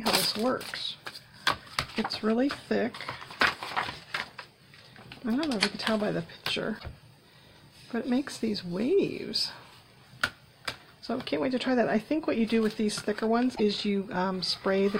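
Damaged data in a compressed stream at 6.75 to 6.85 s and 13.52 to 13.60 s: corrupted frames make the decoder lose sync and resynchronise, producing brief glitches in the sound.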